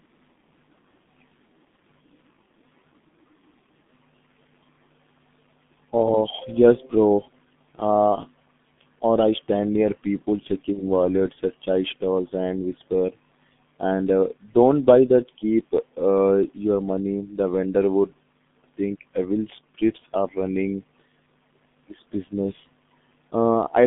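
From the start, the whole clip runs through the G.723.1 codec, and it's heavily damaged. Everything sits between about 150 Hz and 3.6 kHz, so the speech is muffled, hoarse and loses its consonant edges. The coarse, slowly updating voice model fits a rate of roughly 6 kbit/s.

At 10.74 to 10.81 s there's VoIP packet loss concealed by the speech codec. About 30 ms goes missing, which fits one lost frame. The decoder patches it by stretching the last sound out as it fades, and the voice stays weak or distorted for tens of milliseconds or more after about 10.81 s.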